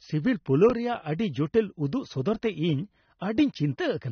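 Throughout the speech, nothing is heard above 6.4 kHz, and the remaining band sounds dull and smeared, with plainly audible codec damage. This is AAC compression, likely AAC-LC at a low bitrate, around 27 kbps. Unlike a plain low-pass filter, it smears sibilants into a fizzy, warbling texture.

At 0.70 s a block of digital silence lasts about 1.45 ms, which fits a 64-sample block of zeros. The output drops out and returns abruptly with no fade. It is far too short to hear as a hole, so it comes across as a tick. It sounds like a click, but it is a brief absence of signal, not an added spike.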